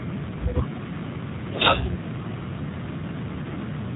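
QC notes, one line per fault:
throughout G.729 codec: the speech is band-limited with nothing above 3.8 kHz and has a plainly audible rough, synthetic quality, consistent with an 8 kbit/s G.729 stream rebuilding each frame from a vocal tract filter, pitch predictor and a few pulses.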